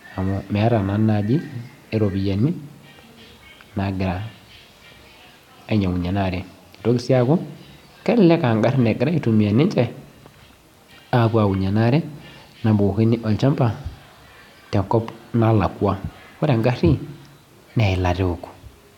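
Nothing technically wrong turns up anywhere in this speech recording; it's a straightforward, fault-free take.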